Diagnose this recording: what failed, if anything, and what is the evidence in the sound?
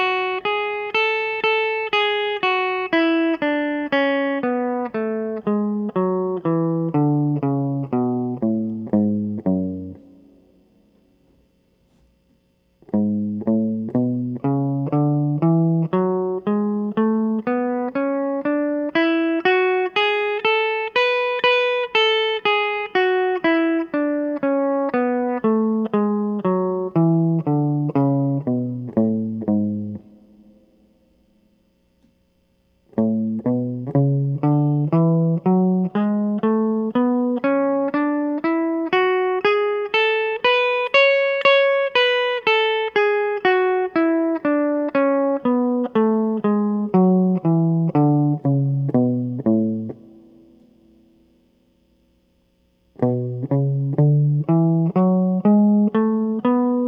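Nothing in this music recording stood out as a fault on listening.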